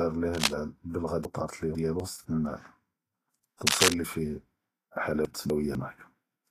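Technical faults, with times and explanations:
Throughout, Vorbis compression: The speech has most likely been encoded with Vorbis at a low rate, and the plainly audible damage fits a bitrate of around 35 kbps. At that rate the encoder narrows the bandwidth and quantises the upper spectrum so coarsely that fine detail is replaced by noise of similar energy. The speech therefore sounds hissy and grainy, with a roughened tonal quality and softened, smeared consonant onsets.
0.33–0.51 s and 3.67–3.94 s, cable scratch noise: The likely cause is a worn cable, connector or control being disturbed, so its contact resistance fluctuates rapidly and injects irregular bursts of noise into the signal. Each episode is heard as a brief scratching, rustling layer over the speech. The first is roughly as loud as the speech, and the second rises a little above it.
1.25–2.0 s and 5.25–5.75 s, chunks out of order: The audio was handled in 250 ms chunks, and one chunk was delivered late and played after material that should have followed it. 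In the first span it arrives two chunks late, so the 750 ms stretch is rearranged. In the second it is one chunk late, so two adjacent chunks are swapped. Nothing is missing, but the speech jumps back and forth, with hard joins between the displaced chunks.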